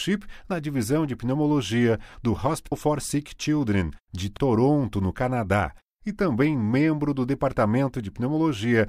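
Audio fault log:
2.71 s, damaged data in a compressed stream: a brief blip just after "divisão de pneumologia do". Corrupt bytes made the decoder misread a frame and lose sync.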